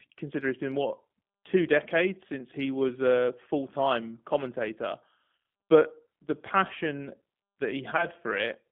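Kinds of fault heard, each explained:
G.729 codec: A low-rate VoIP speech codec running at 8 kbit/s. Instead of sending the waveform, it sends a vocal tract filter, a pitch predictor and a few pulses per 10 ms frame, and rebuilds the speech from them. Here the speech sits in a line band of about 150 Hz to 3.5 kHz, with nothing above. The rebuilt speech carries a plainly audible rough, slightly synthetic texture for the whole clip.
VoIP packet loss concealed by the speech codec: When packets go missing, the decoder fills the gap by extrapolating from its last pitch and filter state and lowering the gain frame by frame. Because each frame depends on the previous one, the error carries forward for a short while after packets return. Two short dropouts are heard, and each one fits a single lost 20 ms packet. The first falls at 5.37 to 5.39 s, between "a full time commentator" and "but the passion". 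The second runs from 7.97 to 8.06 s, where the disturbance lasts about 96 ms.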